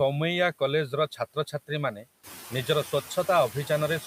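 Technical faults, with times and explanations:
Throughout: noise suppressor artifacts. The suppressor pulls the steady background down by about 13 dB in the gaps and lets it back up under the speech, so the noise floor pumps with the talking. The room noise, which steps up about 10 dB around 2 s, stays around 15 dB under the speech.
1.16 to 1.7 s: speech cut by the noise suppressor. Here it mistakes some quiet bits of speech for noise and ducks them by as much as about 17 dB, adding up to something like 150 ms in all, so those softer sounds come across swallowed and faint.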